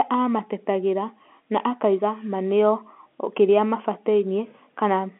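Nothing stood out on listening; the speech sits in the narrow telephone band of ordinary G.711 coding, with nothing above about 3.8 kHz.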